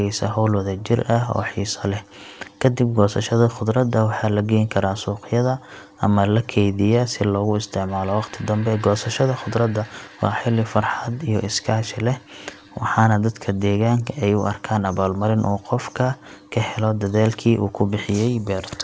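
Nothing goes wrong anywhere in this speech, and the only thing to notice is that the sound tops out around 8 kHz, which is just what you'd expect from a call line running a wideband codec like G.722.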